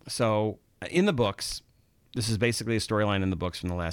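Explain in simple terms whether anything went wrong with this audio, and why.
A scratch or mark on the disc wiped out more data than the player's error correction could repair, once per turn, causing CD scratch ticks. Just after "uh in the", from 1.26 to 2.55 s, the speech carries a steady run of tiny clicks, about eight a second, each lasting only a few milliseconds.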